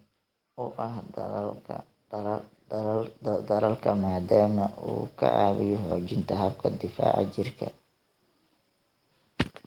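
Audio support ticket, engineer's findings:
Voice and background swell together, 0.56–4.35 s, about 10 dB, settling before "uu ka". Automatic gain rising: AGC judged input too quiet, ramped gain up slowly.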